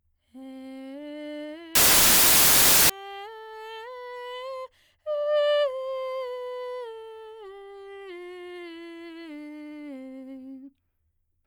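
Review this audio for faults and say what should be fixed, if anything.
From 1.75 to 2.90 s the music turns into loud, harsh broadband noise: samples built from the wrong bytes, with jittery low-order bits landing as the dominant part of each value. Fix the reader so it uses the correct byte order and alignment for each sample.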